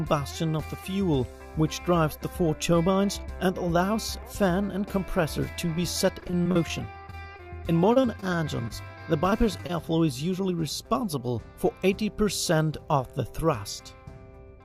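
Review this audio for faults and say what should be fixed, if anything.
Repeated packet loss (robotic sound) runs from 6.13 to 7.48 s and from 7.94 to 8.72 s. Gaps of up to 39 ms, each patched by stretching the preceding sound, give a choppy texture with pieces missing that shows on a spectrogram as smeared, repeated slices.

Short concealed packet loss occurs at 9.30–9.34, 9.58–9.61 and 9.67–9.71 s. Each 20 ms hole is bridged with extrapolated sound, leaving a brief blurred column in the waveform.

A larger jitter buffer and forward error correction on the network path would prevent both faults.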